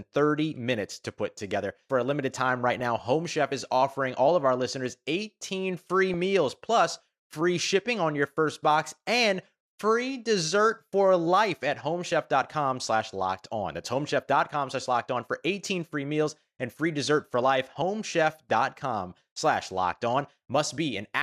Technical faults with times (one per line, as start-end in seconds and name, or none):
2.80 DAB burbling
6.11-6.14 DAB burbling
15.84-16.06 DAB burbling